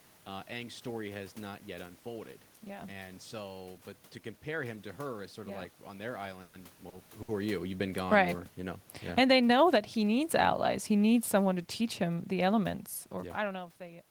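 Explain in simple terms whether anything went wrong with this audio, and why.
Several things went wrong, mostly in how the call carried the sound between about 6 and 14 seconds.

Call audio freeze, 6.41 to 6.55 s: the likely cause is that the network held up the sound's data and the receiver's waiting store ran empty. For about 120 ms the last sound is stretched into a fading buzz, then the audio continues from where it stopped, so nothing is lost, just delayed. The talker also shifts position around 6.5 s, which is natural.

Short stall from a late packet, at 6.89 s and 7.22 to 7.30 s: a single chunk of sound arrived late, so the receiver stretched what it already had until it came. The first stall holds a sound about 30 ms too long, and the second about 60 ms.

Automatic gain falling and automatic gain rising, 9.03 to 13.66 s: the call's automatic volume control kept readjusting itself. 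It turns the sound down from 9.03 to 9.49 s, back up from 9.41 to 10.1 s, then slowly down again from 10.07 to 13.66 s. Voice and room background sink and swell together.

Jitter buffer speed-up, 11.66 to 12.17 s: the receiver had built up too much waiting sound, so it trimmed tiny slices, around 40 milliseconds in all. This stretch plays about 7 percent faster at the same pitch and sounds slightly hurried.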